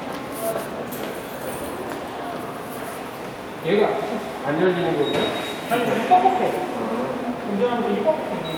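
No technical faults can be heard anywhere in the recording; the signal holds steady throughout.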